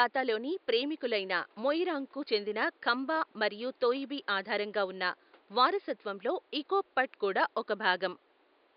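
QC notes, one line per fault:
No faults to note for this speech recording.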